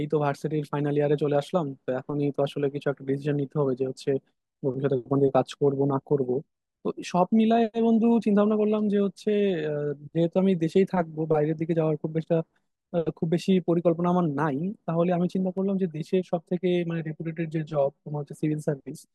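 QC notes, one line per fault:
15.58–18.35 s, channel delay (comb filtering): the speech goes hollow and phasey here, like it's been pushed down a tube. One channel is running roughly 5 ms behind the other, and once they're folded to mono, whatever the two share cancels at evenly spaced frequencies. The first notch sits somewhere around 100 Hz, with more repeating up the spectrum, so the low body thins out and the whole thing sounds hollow and phasey until it snaps back.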